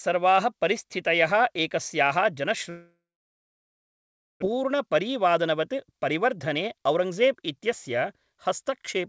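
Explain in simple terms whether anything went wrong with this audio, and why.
Two things went wrong. Right after "परिस्थितयः एकस्याः", at 2.70 s, the speech breaks off and does not return until 4.44 s. For those 1.72 s the receiver briefly carried the last sound forward as a fading buzz, then left about 1.4 s of near-silence. Roughly 1.0 s of speech is gone for good. This is a long network dropout, likely from packets that stopped arriving over the connection.

The dropout left the receiver holding about 0.7 s more audio than it wants. To catch up, from 4.52 s to 9.04 s it repeatedly cut out tiny slices of sound, each one or a few voice cycles long. Together these add up to about half a second. This jitter buffer speed-up plays the speech at roughly 113% speed with the pitch unchanged, so the talker sounds rushed until the end. The call codec also removes everything above 8 kHz.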